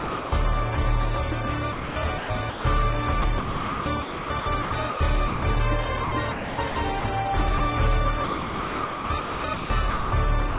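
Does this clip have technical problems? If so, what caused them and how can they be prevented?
Yes. Sound dropped by the voice detector occurs at 0.00–0.32 s, 5.28–5.42 s, 7.58–7.60 s and 10.50 s to the end: the audio gives way to steady synthetic noise, likely because the sender's detector judged low-level sound as background and stopped transmitting. Lowering the detector's threshold and adding hangover time prevents this.

Sound chopped by the voice detector appears at 1.72–2.64 s, 3.22–5.00 s, 6.04–7.04 s and 8.24–10.12 s. Here the sound repeatedly cuts in and out. The likely cause is the detector toggling transmission on and off. Disabling the detector or raising its hangover and sensitivity stops it. The band limit at 4 kHz fits a narrowband call codec.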